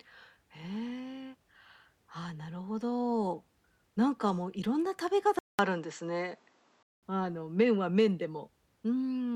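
At 5.39 s the speech drops out for 200 ms, then returns duller, with nothing above 7.9 kHz, a level shift of about 5 dB and a faint new noise floor until 7.03 s. This points to an input switched to a poorer device.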